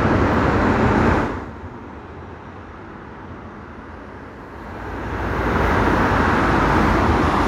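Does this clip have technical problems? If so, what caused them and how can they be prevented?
No, these sounds carry no technical fault, and the gradual rises and falls in level are smooth, deliberate fader moves rather than a defect in the signal.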